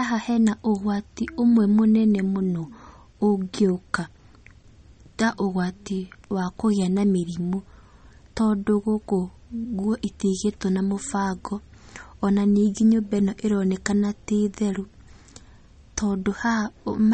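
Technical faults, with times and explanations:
Throughout: MP3 compression. The speech has a watery, swirling quality, s sounds turn metallic and chirpy, and nothing is left above 8.4 kHz, which makes it sound dull. This is likely MP3 coding at a starved bitrate, which fits about 33 kbps. With too few bits, the encoder removes the treble at a fixed cutoff and discards weak frequency lines. Those lines then flicker on and off from frame to frame, creating the swirl and the smeared consonant attacks.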